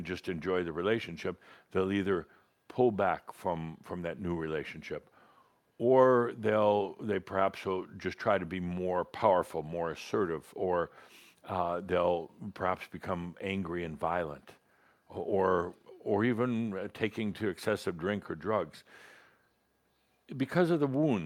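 No technical faults are audible.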